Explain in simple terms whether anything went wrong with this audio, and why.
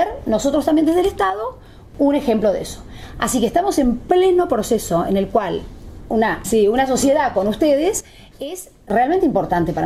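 Two spots where the level suddenly drops: from 1.3 to 1.95 seconds, and a deeper dip from 8.0 to 8.9 seconds. Each time the sound and its background noise fall together in an instant, then snap back up. That's a sudden gain jump, likely a volume setting being switched abruptly instead of faded in smoothly, so the whole signal steps down at once rather than easing.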